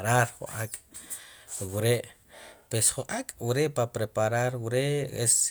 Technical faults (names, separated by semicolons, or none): none